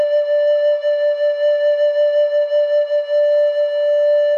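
A short music clip in which no technical faults can be heard at any point.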